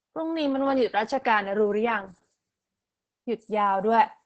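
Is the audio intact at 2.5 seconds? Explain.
No. Throughout the clip, including at 2.5 s, the speech has been through Opus voice compression in its SILK predictive mode. The band is trimmed to 8 kHz and the excitation is coarsely coded, which fits a bitrate near 10 kbps. The speech therefore sounds heavily muffled, hoarse and faintly robotic.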